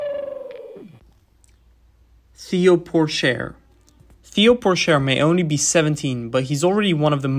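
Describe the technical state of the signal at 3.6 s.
At 3.6 s the signal runs cleanly, with no dropout, distortion or other fault at that point.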